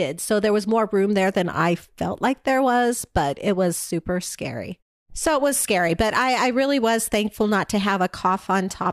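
No technical faults are audible in this speech clip; the background dropping to silence in the pauses and returning with the next sound is normal behaviour here, with only very quiet sound lost.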